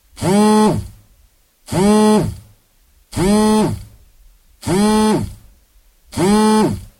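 No audible technical faults anywhere in this audio.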